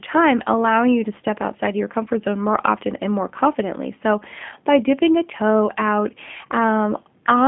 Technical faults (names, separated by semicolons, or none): G.729 codec